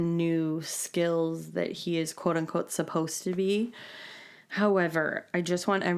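Speech recording with no audible technical faults.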